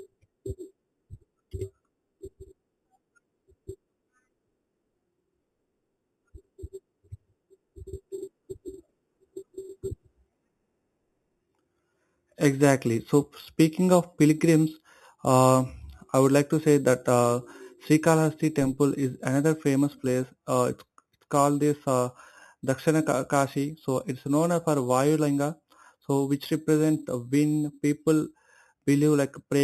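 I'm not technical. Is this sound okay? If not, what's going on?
No, not quite. Throughout the speech there's a bright, metallic fizz riding on top of everything, getting louder whenever the talking gets louder. That's imaging from sample-and-hold upsampling. The audio seems to have started at a low quality, around 8 kHz, and was stretched to a higher one by simply repeating each sample with no smoothing. That leaves mirror copies of the sound, the first one sitting between 4 and 8 kHz, where it comes through as that fizz.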